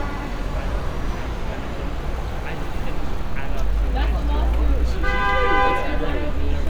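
Everyday sound recording with no technical faults detected.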